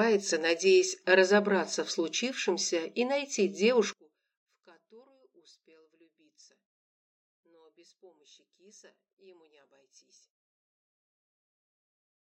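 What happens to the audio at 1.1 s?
Nothing goes wrong at 1.1 s; the audio plays through that moment intact, with no dropout, click, distortion or other fault.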